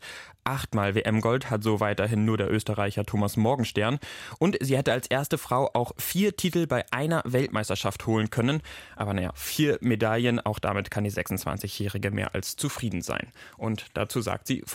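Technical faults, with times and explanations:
No technical faults can be heard anywhere in this speech recording. There is nothing to mark with a time or to explain.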